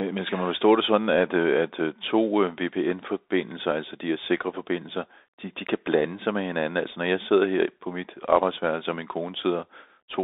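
From start to finish the speech carries the Bluetooth CVSD headset codec. The band sits between roughly 300 Hz and 3.7 kHz, and within it a one-bit delta modulator, consistent with a 64 kbit/s stream, tracks the waveform with an adapting step. Loud, bright moments outrun that step, so s sounds turn scratchy over a granular hiss. A clean telephone band limit would sound equally narrow but smooth, without this gritty slope-overload texture.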